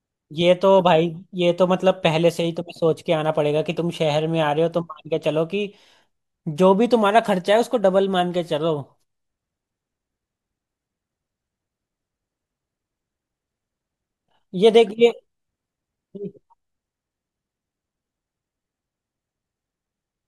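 Nothing in this speech recording stands out as a technical fault at any point, so there's nothing to flag here.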